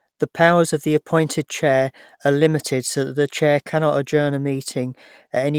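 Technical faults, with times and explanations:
No technical faults can be heard in this speech recording. There is nothing here to time or explain.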